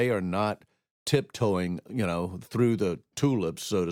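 No technical faults can be heard anywhere in this speech recording. There is no moment in the audio that calls for a timestamp or a closer listen.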